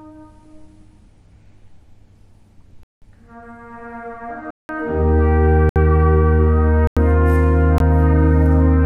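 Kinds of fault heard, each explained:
Block of digital silence: stretches of the output drop abruptly to silence and return without any fade. The output buffer was apparently not filled in time. The two longest gaps, at 2.83 s and 4.51 s, last about 186 ms, which fits an 8192-sample block. The one at 6.87 s lasts about 93 ms (a 4096-sample block), and shorter dropouts of 66 ms at 5.69 s and 20 ms at 7.78 s also occur.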